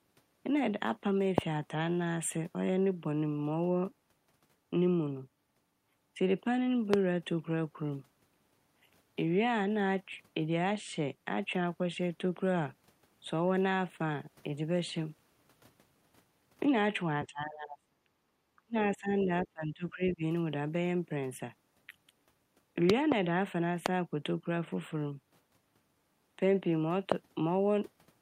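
A sudden voltage step, likely from a plug, switch, static discharge or driver glitch, was added to the signal several times in this speech recording, producing loud pops about 20 to 25 dB above the speech at 1.38, 6.94, 23.86 and 27.12 s, plus a pair in quick succession between 22.90 and 23.14 s, each heard as a sharp pop over speech that carries on beneath it. The echo canceller could not separate the local talker from loudspeaker echo while both sides spoke, and likely turned the talker down with it, giving speech suppressed in double talk from 17.26 to 18.09 s, 18.56 to 18.76 s and 18.92 to 20.23 s, where the voice dips by as much as about 35 dB.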